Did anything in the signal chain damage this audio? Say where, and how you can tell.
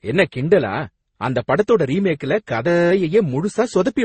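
Yes. Transcoding between lossy codecs, throughout: nothing survives above 8.3 kHz, and several distinct kinds of smearing and swirl overlap in the speech. This is likely a codec-stage chain, with each encoder spending bits on the previous one's artefacts while the lowest bandwidth limit persists.

System hang loop, 2.68 to 2.91 s: the speech gives way to a steady buzz at 172 Hz. A single 5.8 ms slice repeats about forty times, which fits a 256-sample ring buffer replaying while the driver or system stalled. Almost nothing is lost around it.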